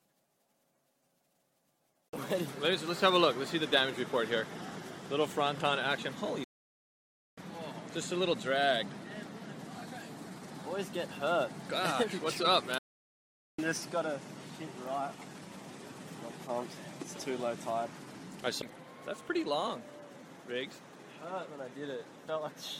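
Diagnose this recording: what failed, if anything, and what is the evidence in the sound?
The failure is a playback stall at the playback stage. The sound stops abruptly in mid-flow at 6.44 s and stays silent until 7.38 s, a gap of about 0.93 s. It happens again from 12.78 s to 13.59 s, about 0.80 s of silence. The sound then continues. Both gaps are too long and too clean to be dropouts in the recording itself. The likely cause is a player that ran out of buffered data, or a blocked playback thread, leaving the output silent until it recovered.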